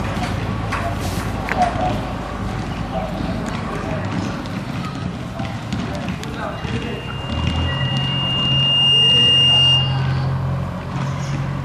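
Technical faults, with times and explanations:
6.51 to 10.17 s, loudspeaker feedback squeal: the microphone picked up the loudspeaker it was feeding, and the loop gain went above one at 2.8 kHz. That tone kept reinforcing itself, swelling over roughly two seconds into a piercing squeal about 10 dB above the rest of the sound.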